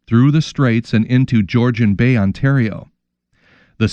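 Nothing goes wrong anywhere in this bit of speech, so there's no fault to walk through.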